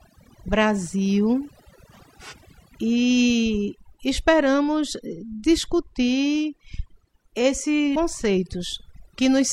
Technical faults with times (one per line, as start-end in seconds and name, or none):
0.00-9.53 overdone noise removal
2.28-2.34 compressed frames skipped
7.91-7.96 compressed frames skipped